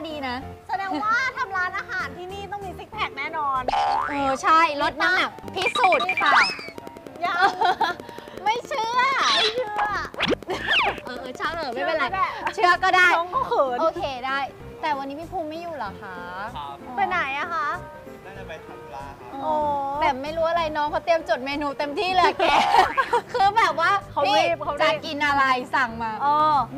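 From 5.39 s to 11.74 s a train of clicks runs over the audio: short, similarly shaped pulses arriving at a regular 10.7 per second, roughly seventy in all, peaking around 5 dB above the surrounding signal. The result is a steady ticking that stays independent of the programme material. The cause is likely an impulsive disturbance entering the signal path, such as interference from nearby equipment or a faulty connection or power supply.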